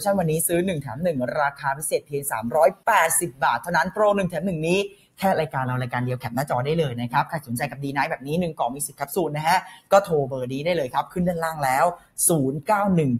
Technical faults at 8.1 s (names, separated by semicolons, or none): noise suppressor applied to music or sounds; sound cut by the noise suppressor